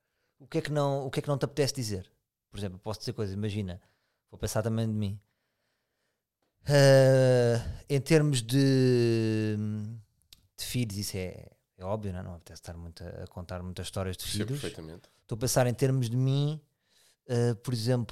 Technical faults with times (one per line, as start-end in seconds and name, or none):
none